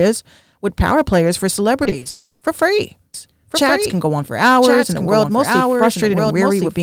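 From 1.83 to 2.07 s the link lost packets again and again: four short gaps, none longer than 20 ms, each patched by extending the sound just before it, so about a third of that quarter-second, some 80 ms in all, is concealed rather than real. This is repeated packet loss (robotic sound). The speech turns choppy, with small pieces missing, and the patches come too close together for the ear to smooth them over.

Right after, from 2.09 to 2.43 s, the sound points to a long network dropout as the likely cause: roughly 320 ms of audio never arrived. The receiver covered the whole hole by stretching the last sound, so no silence is heard, only a smeared, buzzy continuation where real speech should be. When proper audio resumes, that stretch of speech is simply gone.

From 3.14 s to the end, a doubled audio track is audible, most likely a second capture of the same signal arriving by a slower route. 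A full-band copy trails the original by about a second, around 5 dB quieter. It carries no room colour or decay, so it sounds like a distinct, dry second layer of the same speech running behind. It cuts in abruptly at 3.14 s and continues to the end.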